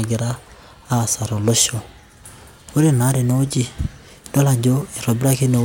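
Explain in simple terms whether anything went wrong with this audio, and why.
Listening to this speech recording, nothing stood out as having gone wrong.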